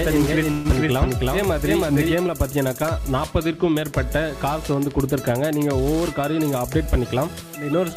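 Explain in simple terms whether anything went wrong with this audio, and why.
Three things go wrong in this audio.

From the very start until about 2.14 s there is a doubled audio track: every sound is heard twice, the second copy about three tenths of a second behind and roughly as loud as the first. Unlike a room echo, the copy is not softer or smeared. It is a clean duplicate, and at 2.14 s it stops abruptly. The likely cause is the same sound being picked up a second time through a slower route.

Inside that stretch, from 0.51 to 0.67 s, a call audio freeze occurs. The last sound hangs on and fades for about 135 ms, then carries on exactly where it stopped. Nothing is skipped; a pause has simply been inserted. That is what separates it from a dropout, where a piece of the audio is lost. The likely cause is delayed network packets that left the receiver with nothing to play for a moment.

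From 6.39 to 7.73 s a jitter buffer speed-up makes the audio run about 9% faster, so it sounds hurried. The pitch does not rise, which is how it differs from a sped-up recording that also sounds higher. Many tiny slivers, about 150 ms in total, are cut out so the receiver can catch up after building up a backlog.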